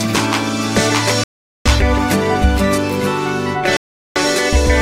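At 1.24 s and 3.77 s the sound drops to silence for 0.42 s and 0.39 s, then resumes: a likely Bluetooth stall, with interference delaying packets until the headphone buffer emptied.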